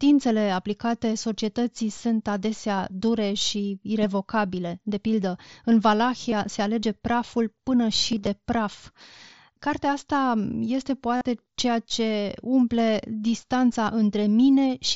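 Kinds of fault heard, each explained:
Concealed Bluetooth headset packet loss: at 6.31 s between "pildă în" and "se alege", 8.12 to 8.27 s, and 11.16 to 11.21 s before "ceea ce umple", bits of speech never arrived and the receiver patched each gap with the best-matching slice of the preceding audio. The 15 ms gap is nearly hidden, the 8.1 s losses are brief blips scattered over 150 ms, and the 50 ms stretch at 11.2 s holds a buzzy tone, warbling as speech returns.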